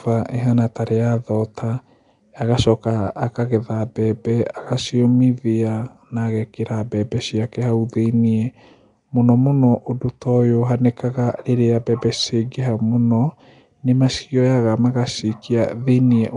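From start to finish the speech carries a rough, hissy halo and a smeared, underwater blur, with nothing above 10.6 kHz. The likely cause is Nellymoser compression, Flash's old microphone codec, filling starved bands with noise at a rate consistent with 44 kbps.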